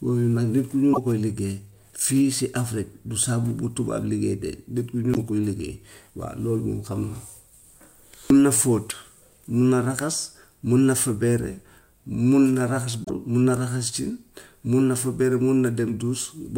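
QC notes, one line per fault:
0.93–0.98 s, 5.13–5.18 s, 8.89–8.93 s, 13.04–13.10 s, broken MP3 bit reservoir: frames were likely lost, so the next frames drew their borrowed data from the wrong bytes. Speech jumps forward and a brief chirp, burst of noise or short hole, 34 to 52 ms long with 24 ms frames, covers each join.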